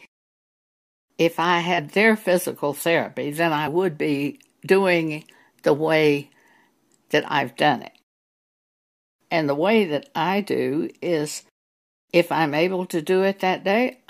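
The decoder dropped compressed frames twice, either because they never reached the file or because it rejected them as damaged. At 1.77 s about two frames go missing, and the speech jumps forward by roughly 50 ms. From 3.66 to 3.68 s a single frame is lost, a skip of around 20 ms.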